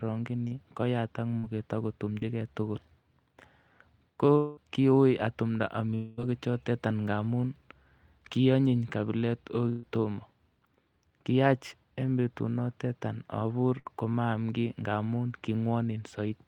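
Speech, interrupted by three kinds of transmission gap. Short concealed packet loss appears at 0.47–0.53 s, 1.39–1.45 s and 2.19–2.23 s, where about 40, 40 and 20 ms went missing and brief extrapolation bridges each hole into a smear or wobble rather than an audible break. Two longer stretches at 4.37–4.59 s and 5.95–6.19 s, the second just before "choton ngamun", are likely long network dropouts: roughly 200 and 220 ms are lost and bridged with a fading buzz or hiss that never settles into silence before the audio resumes further on. A burst of packet loss follows "kionyin kabilet" at 9.69–9.85 s (about 140 ms) and "kiyach en betunoton abur" at 13.79–13.87 s (about 60 ms). In these, the last sound is held and fading, and it is cut short by the resumed audio sooner than in the dropouts.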